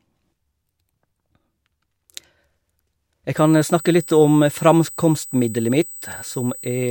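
USB whine enters at 3.37 s and runs to the end of the speech: a steady, fixed-pitch tone at 8 kHz, roughly 20 dB below the speech. The 125-microsecond microframe rhythm of the USB bus is leaking in through the power or ground.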